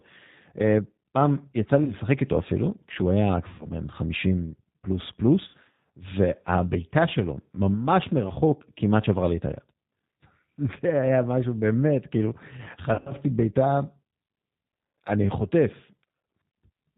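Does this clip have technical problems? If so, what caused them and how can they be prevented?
Yes. The whole recording carries G.729 codec damage, and it is plainly audible. The speech is rebuilt from a vocal tract filter, a pitch predictor and a few pulses per short frame. Nothing above 4 kHz survives. The result sounds narrow, slightly rough and synthetic. That fits an 8 kbit/s G.729A link. To prevent it, carry the call on a wideband codec such as Opus or G.722 when bandwidth allows.

There is also VoIP packet loss concealed by the speech codec, at four points. The first is 1.84 to 1.94 s, with about 40 ms missing. The second is 3.49 to 3.67 s, about 100 ms. The third is 5.48 to 5.55 s, about 60 ms. The last is 12.94 to 13.15 s, where 120 ms of gaps are scattered over 160 ms and the longest run is 60 ms. In each gap the decoder extends the last pitch and filter with falling gain. This produces a buzzy tone or coloured noise that fades, and the speech stays weak briefly after each gap. 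To prevent it, use a stable network with QoS priority, a jitter buffer, and forward error correction or redundancy.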